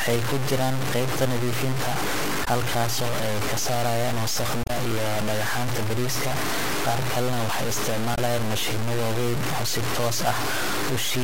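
From the start, the speech carries a harsh, grainy distortion that tracks every syllable, with the error about as loud as the speech itself. This is low bit depth without dither, likely the signal truncated to just 3 bits. At 2.44 to 2.48 s, just before "halkaasoo ay ka saarayaan", a brief glitch breaks through. It returns at 4.62 to 4.70 s, right after that phrase, and again at 8.14 to 8.18 s. These glitches are damaged data in a compressed stream: the decoder misreads corrupted frames, loses sync and searches for the next frame header.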